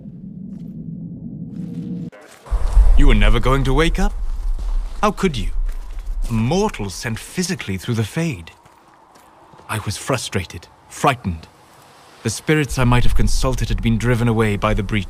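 No faults detected anywhere in the audio.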